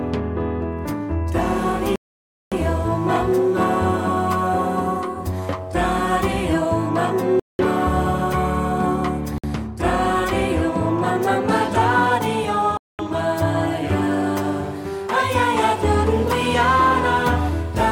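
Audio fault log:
1.96–2.52 s, 7.40–7.59 s, 9.38–9.44 s, 12.77–12.99 s: Bluetooth stall. The sound cuts to silence for 560, 196, 55 and 218 ms, then resumes. This is likely from radio interference holding up packets, so the headphone buffer ran dry and playback waited for retransmissions.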